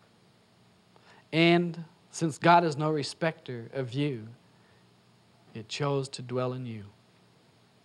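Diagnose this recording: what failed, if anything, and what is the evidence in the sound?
Around 2.35 to 2.40 s the sound drops abruptly by about 6 dB and then snaps back, which is the signature of one channel dropping out before the mono sum. The likely cause is a momentary break in analogue wiring, like a loose connector, briefly losing one side entirely.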